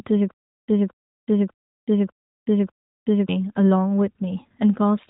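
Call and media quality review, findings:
Stutter with silent gaps, 0.31–3.29 s: one 0.22 s fragment repeats five times, 0.37 s digital silence between, 0.6 s period. Waveform: identical blocks separated by near-flat silent lines. Likely a stalled player or stream buffer replaying its last fragment each retry. Speech in the gaps is lost.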